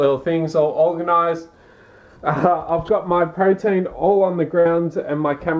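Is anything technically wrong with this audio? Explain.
Yes. At 4.60 to 4.67 s there is a burst of packet loss: lost packets made the receiver hold and fade the last sound for 52 ms, then skip 60 ms ahead.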